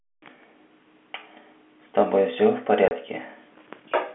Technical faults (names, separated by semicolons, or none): packet loss filled with silence